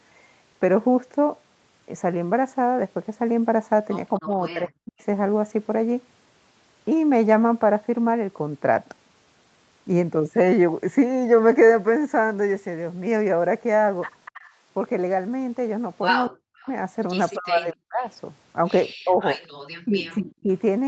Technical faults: speech suppressed in double talk; echo leak

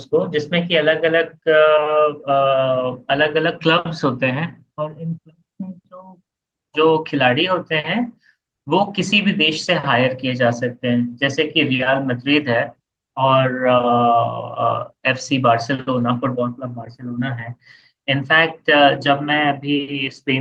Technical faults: none

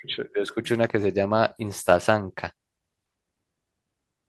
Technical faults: none

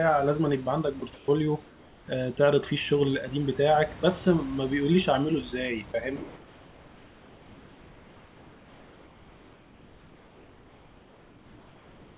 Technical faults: sound dropped by the voice detector; comfort noise in place of the background

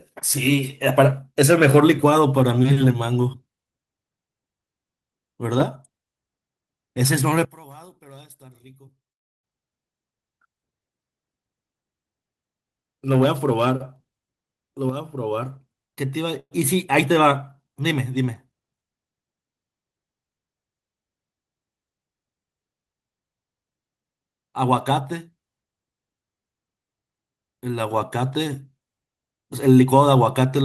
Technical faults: one channel inverted; call audio freeze

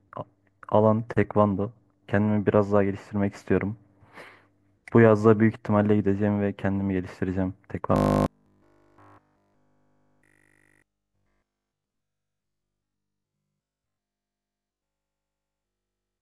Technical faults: robotic sound from repeated short buffers

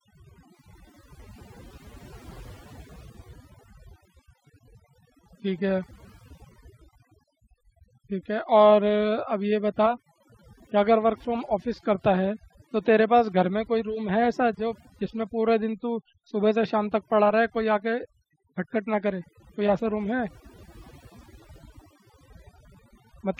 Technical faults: overdone noise removal

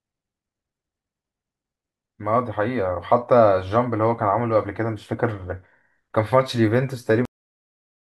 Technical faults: cut-off end

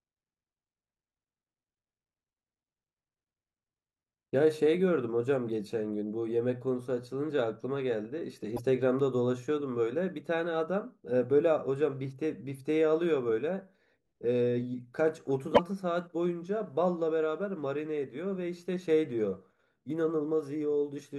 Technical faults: broken MP3 bit reservoir

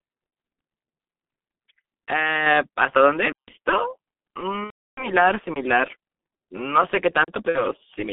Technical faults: G.723.1 codec; microphone volume stepped up; underrun with held sample; VoIP packet loss concealed by the speech codec

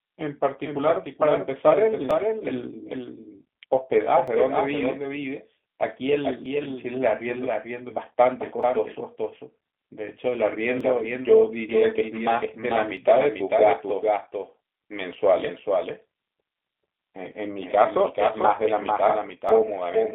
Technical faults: doubled audio track; G.729 codec; clock drift buffer slips

